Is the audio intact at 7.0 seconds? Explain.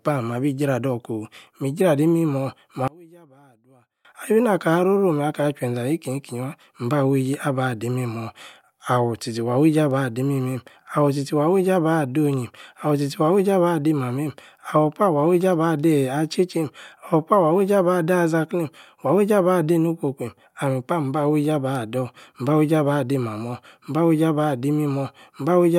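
Yes, the speech at 7.0 seconds is intact, with no audible fault at that moment.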